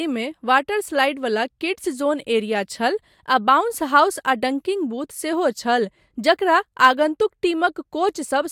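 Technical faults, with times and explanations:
No technical faults are heard in this clip.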